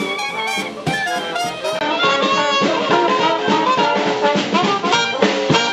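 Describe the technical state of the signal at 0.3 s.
At 0.3 s the signal is intact, with no dropout, clipping, glitch or other fault to be heard.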